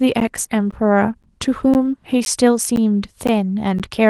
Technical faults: gap between chunks

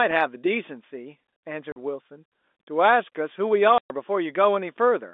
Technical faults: packet loss filled with silence

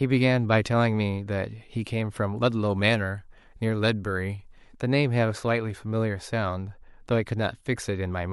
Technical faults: pre-echo

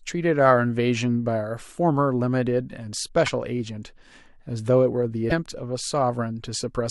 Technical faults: broken MP3 bit reservoir

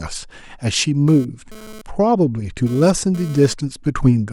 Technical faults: GSM phone buzz

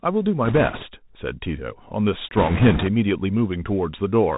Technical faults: Bluetooth CVSD headset codec; bit errors on a Bluetooth voice link

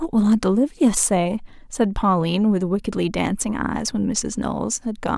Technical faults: none

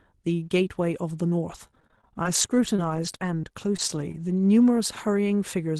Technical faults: repeated packet loss (robotic sound)

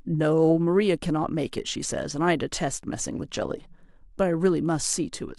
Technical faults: overlap-add ripple

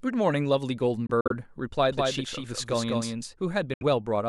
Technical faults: Bluetooth dropout; doubled audio track

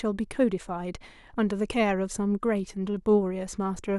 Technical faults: none

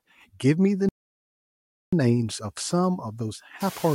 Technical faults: noise suppressor artifacts; playback stall

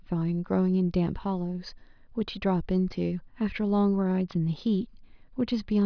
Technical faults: none

